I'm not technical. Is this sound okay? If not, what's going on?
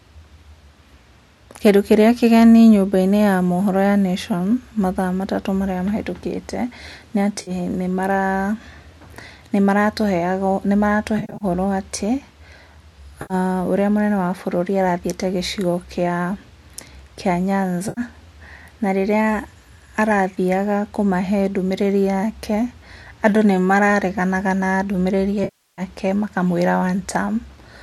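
No. The speech has AAC frame loss with concealment. Small pieces of the stream went missing, and the player filled each gap by stretching out the last sound it had. Unlike a clean cut to silence, these patches sound smeared and noisy, at 7.42 to 7.51, 13.22 to 13.34 and 17.89 to 18.01 s. From 11.19 to 11.45 s several short losses give a smeared, noisy stretch. The longest, 25.44 to 25.82 s, fades down toward silence and back.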